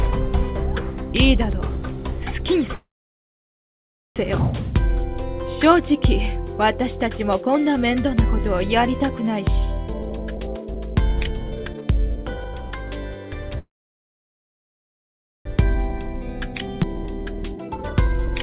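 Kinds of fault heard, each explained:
call audio freeze: The sound stalls at 2.74 s for about 1.4 s and at 13.58 s for about 1.9 s, a brief fading tail then near silence, likely from packets held up and an emptied jitter buffer. It resumes exactly where it stopped, so nothing is lost, unlike a skip.
jitter buffer speed-up: From 9.87 to 13.57 s the audio runs at 135% speed, trimming about 1.5 s, and from 15.57 to 18.34 s at 118%, trimming about half a second. Pitch stays unchanged, which separates it from a plain faster playback that would raise pitch.
skip ahead: At 16.83 to 16.85 s playback jumps forward, dropping about half a second of audio, with the two sides spliced almost directly. Unlike the freezes there is no audible pause. Unlike the speed-up, a whole chunk vanishes at once rather than being shaved off gradually.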